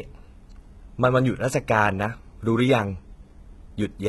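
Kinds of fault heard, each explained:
HE-AAC compression: The speech sounds heavily squeezed. Nothing comes through above about 11.8 kHz, and the treble that is there sounds synthetic rather than real, with s sounds coming out gritty and lispy. That's likely spectral band replication at work: the codec keeps only the lower band properly and copies it upward under a rough envelope, so the top harmonics don't line up with the ones below. The amount of damage fits a very low rate, around 16 kbps.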